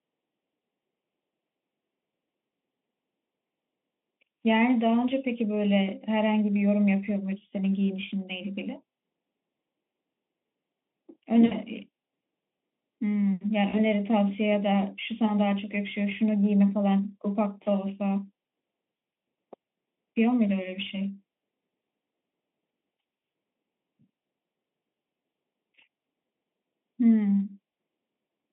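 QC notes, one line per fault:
throughout, channel delay (comb filtering): the audio sounds hollow and phasey, because a copy late by about a third of a millisecond is summed in and notches the spectrum from around 1.5 kHz.
11.45–11.52 s and 13.69–13.79 s, VoIP packet loss concealed by the speech codec: the sound smears into a fading buzzy tone or coloured noise as the decoder extrapolates across gaps of 60 ms and 40 ms, consistent with three and two lost frames.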